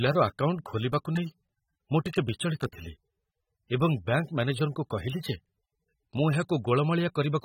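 Across the whole speech clip the encoder has likely squeezed the signal through AAC compression at a low rate. The damage fits an AAC-LC stream at around 27 kbps. Too few bits were left to code every frequency line accurately, so detail was quantised away and nothing survives above 16.6 kHz. The result is plainly audible: speech sounds dulled and smeared, with a warbling, fizzy texture on sustained sounds and sibilants.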